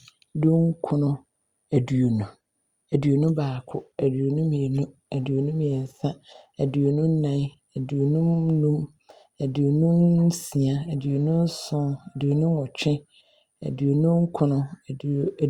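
Nothing in this speech recording stands out as a technical fault, so there's no problem to point to at any moment.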